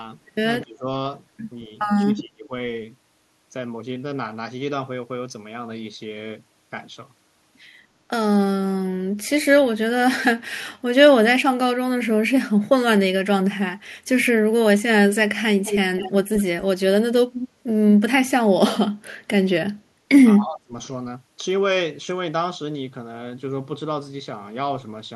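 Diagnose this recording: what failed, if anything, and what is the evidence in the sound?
Call processing failed at the echo canceller, which likely misread double talk as echo and turned the near talker down. The speech dips or breaks at 0.62–0.86 s, 2.04–2.52 s and 20.33–20.73 s, sinking by about 20 to 30 dB at worst.

Call processing also shows echo leak: the far end's canceller likely left part of its loudspeaker pickup in place and sent it back. Short, delayed copies of the speech arrive 198 ms late at 15.64, 15.97, 16.36 and 17.33 s, about 5 to 15 dB below the direct sound.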